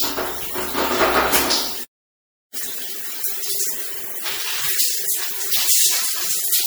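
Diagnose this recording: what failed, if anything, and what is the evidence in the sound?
Throughout, the sound is swirly, smeared and hollow, with soft, blurred attacks beyond what one lossy pass would leave. This is likely generation loss at the codec stage: repeated MP3 decoding and re-encoding, fitting roughly five passes at about 96 kbit/s, each re-quantising on a shifted frame grid.

At 1.84 s the sound cuts out mid-flow and stays silent for about 0.71 s, resuming at 2.54 s. This is a playback stall at the buffer or playback stage, likely the player starving for data or its thread being blocked.

From 2.54 s to 5.36 s the sound hurries along at about 1.25 times normal speed, with pitch unchanged. This is time-compressed catch-up in the player, which cuts out and cross-fades small slices to clear the backlog built up during the stall.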